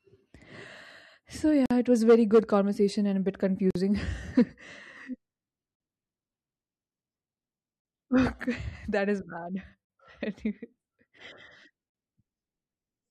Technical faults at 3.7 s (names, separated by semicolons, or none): gap at a join of encoded pieces